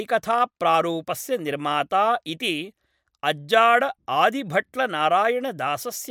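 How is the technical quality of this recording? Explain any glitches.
The recording shows no technical glitches; the signal stays continuous and stable throughout.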